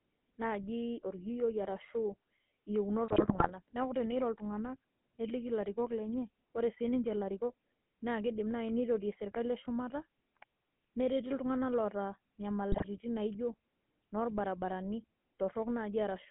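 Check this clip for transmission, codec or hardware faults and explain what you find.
Two faults are audible: GSM full-rate coding across the whole clip, and two bursts of GSM bit errors.

The GSM full-rate codec is present from start to finish, and its damage is plainly audible. The speech is squeezed into a band of about 150 Hz to 3.4 kHz, which fits a 13 kbps full-rate stream. The codec rebuilds speech from a vocal-tract filter driven by a sparse, regularly spaced pulse train, so the excitation is coarse. The result is a buzzy, gravelly roughness and a dull, band-limited sound.

GSM bit errors break in from 3.08 to 3.53 s and again from 12.72 to 12.87 s. The error rate in both bursts is a few percent. Corrupted filter, pitch and gain parameters reach the decoder, and each damaged frame is rebuilt with the wrong spectral shape or a wrong level. The sound breaks into squawks, pops and gargling. 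The first burst is longer and covers many consecutive frames, while the second is a short spatter.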